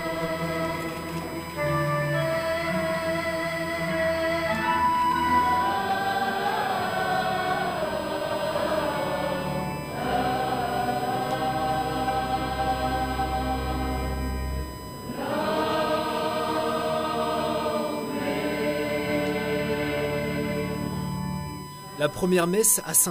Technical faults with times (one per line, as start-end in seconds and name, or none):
0.00-23.10 USB whine